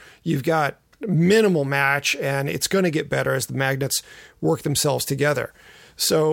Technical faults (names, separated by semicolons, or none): none